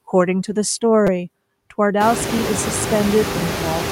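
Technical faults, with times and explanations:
Throughout: noise suppressor artifacts. The suppressor pulls steady-noise bands down by about 20 dB frame by frame, so the background drops between phrases and comes back under speech. This is most noticeable after about 2 s, when room noise rises by about 24 dB to roughly 8 dB below speech.
1.07 s and 2.39 s: repeated buffer. Each time, new audio arrived late and the device replayed a 5.8 ms piece, which fits a 256-sample buffer. At 1.07 s it plays four times in a row, and at 2.39 s twice. The hard joins between copies come out as a short buzz and a click, with essentially no audio lost.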